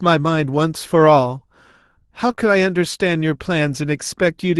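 It's a speech recording over a call path whose top end stops around 12 kHz, which fits Opus. The problem is a run of short concealed packet loss: three back-to-back gaps at 2.27–2.31 s, 2.31–2.35 s and 2.35–2.39 s. Each lost about 20 ms of audio, and the receiver papered over each hole by extending the last bit of sound before fading back into the real signal. That leaves roughly a tenth of a second of smeared or wobbly audio.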